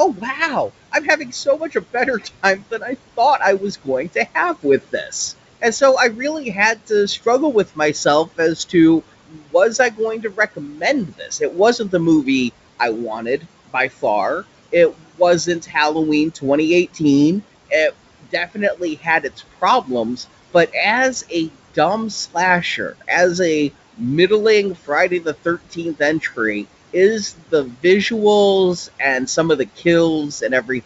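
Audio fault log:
Throughout: noise suppressor artifacts. The suppressor pulls the steady room noise, which sits about 19 dB under the speech, down by about 17 dB, deciding band by band and frame by frame. The noise floor therefore drops in the gaps and comes back up beneath the speech. On a spectrogram the background looks patchy and uneven between phrases rather than evenly grey. The G.722 wideband coding can be heard cleanly up to 7 kHz.
0.14–5.81 s, 6.75–12.26 s and 13.21–30.69 s: speech cut by the noise suppressor. Across these stretches the suppressor mistakes soft parts of the speech for noise and turns them down along with the background. Quiet consonants and word endings sound swallowed. The cuts are about 13 dB deep in the first span, just before "I really", about 19 dB in the second, just after "I really", and about 18 dB in the third. In total they cover somewhere around 0.7 s, 1 s and 2 s. 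Each is a brief dip in the waveform envelope. On a spectrogram they show as missing high-frequency consonant energy.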